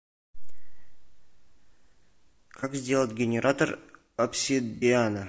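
Rough, grainy speech runs throughout, with noise filling the spaces between harmonics and a thin, synthetic-sounding top band. This likely comes from low-delay AAC compression (AAC-ELD) at a low bitrate, around 32 kbps, where very short frames resolve pitch harmonics poorly. Two brief smeared, noisy patches occur at 2.60 to 2.64 s and 4.76 to 4.84 s, the second roughly twice as long. They are AAC frame loss with concealment: the decoder patched over the missing audio, about one frame's worth and then two, by reusing the last good spectrum.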